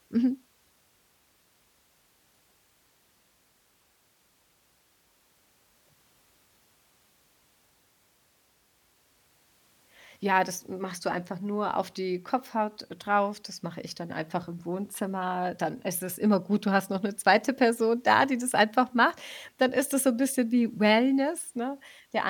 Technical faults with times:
none

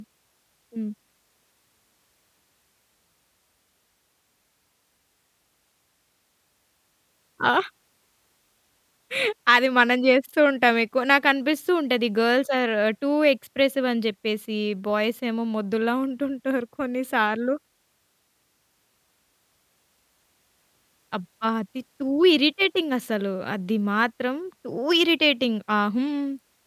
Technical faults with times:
none

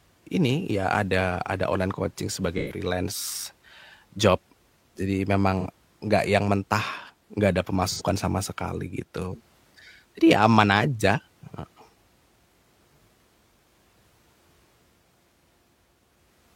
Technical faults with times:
2.57-2.80 AAC frame loss with concealment
5.60-5.67 AAC frame loss with concealment
7.89-8.01 AAC frame loss with concealment

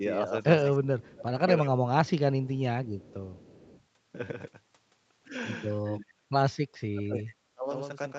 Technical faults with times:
0.00-8.18 doubled audio track
0.79-2.61 speech suppressed in double talk
2.85-3.83 echo leak
5.84-6.33 speech suppressed in double talk
6.90-7.71 speech suppressed in double talk

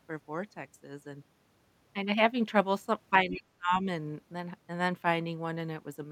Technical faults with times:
3.10-3.86 speech suppressed in double talk

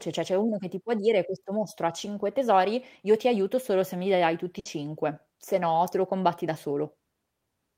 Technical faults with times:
4.59-4.67 burst of packet loss

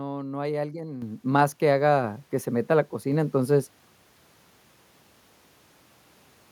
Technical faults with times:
1.02 microphone volume stepped up

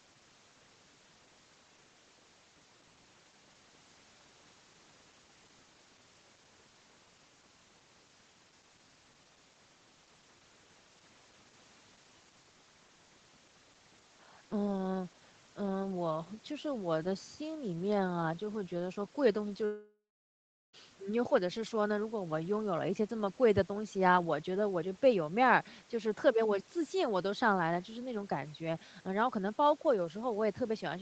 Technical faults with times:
19.65-20.75 long network dropout

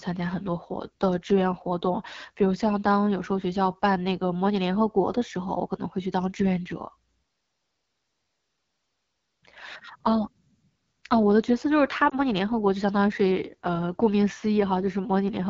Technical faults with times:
0.00-15.49 AMR wideband (HD Voice) codec
12.09-12.15 lost AMR speech frames

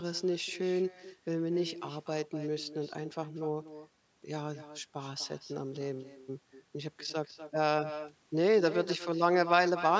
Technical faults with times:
0.00-10.00 echo with no canceller

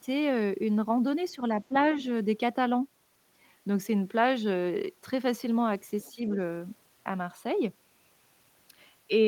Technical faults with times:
1.35-1.74 speech suppressed in double talk
6.01-6.12 other side's voice leaking through
6.14-6.20 speech suppressed in double talk

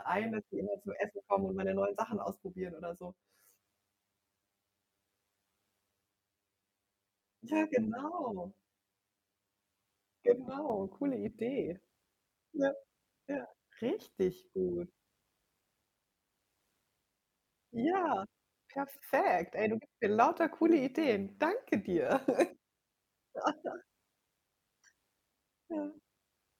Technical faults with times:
0.00-26.59 overlap-add ripple
0.00-10.70 channel delay (comb filtering)

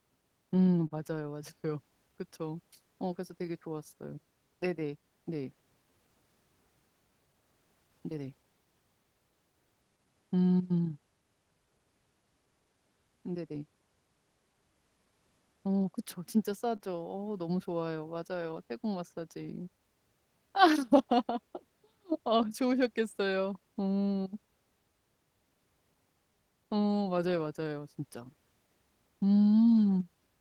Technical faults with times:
0.00-30.41 clock drift between sender and receiver
0.87-0.93 short stall from a late packet
2.12-15.55 repeated timing corrections
16.76-16.82 short stall from a late packet
18.14-30.22 repeated timing corrections

